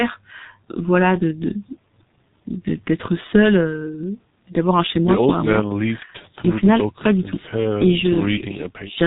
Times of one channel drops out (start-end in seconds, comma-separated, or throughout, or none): none